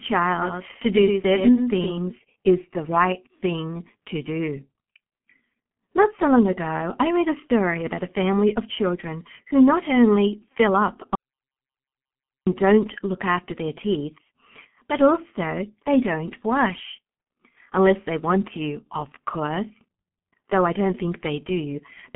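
Throughout, the speech passes through the G.723.1 codec, heavily damaged. Nothing is heard above 3.6 kHz. The slow frame-based voice model, which fits a rate near 6.3 kbit/s, leaves the voice muffled and hoarse. Consonants smear together.

From 0.42 to 1.98 s, just before "is the right thing", a doubled audio track appears. A full-band copy trails about a tenth of a second behind, somewhat quieter. It is dry and has no tail. It likely comes from a second, slower capture path.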